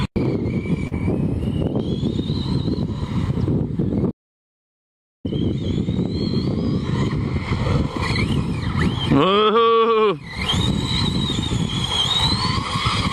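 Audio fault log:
0.87–0.93 s, short concealed packet loss: roughly 40 ms of audio failed to arrive in time, and the decoder patched the gap by extending the preceding sound before blending back into the real signal, leaving a brief smear or wobble.
4.11–5.25 s, audio dropout to silence: the signal cuts to silence for about 1.13 s, with no room tone, then resumes mid-flow. Whatever occurred in that span is lost, most likely because the input was disconnected or muted while recording continued.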